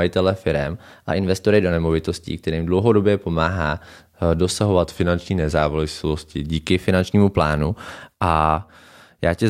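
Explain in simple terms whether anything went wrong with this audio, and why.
Twice the speech briefly runs fast or slow, with pitch moving along with speed: from 0.75 to 1.71 s it plays about 6% faster and roughly a semitone higher, snapping back just before "nemovitostí kterým dlouhodobě pomáhá". From 4.83 to 6.70 s it plays about 6% slower and a semitone lower, recovering before "finančnímu plánu". This is a drift correction step, likely from software matching two clocks by abruptly changing the playback rate to refill or drain its buffer.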